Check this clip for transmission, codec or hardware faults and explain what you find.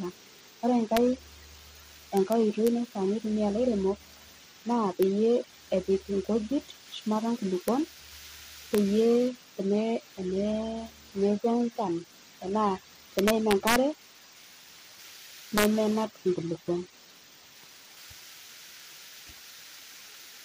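Integer overflow hits this speech at 0.97, 2.17–2.68, 5.03, 7.68, 8.75–8.78, 13.19–13.76 and 15.58–15.65 s. Loud peaks pushed only about 0 to 2 dB past the integer limit. They wrapped to the opposite sign instead of being limited, producing violent cracks harsher than clipping.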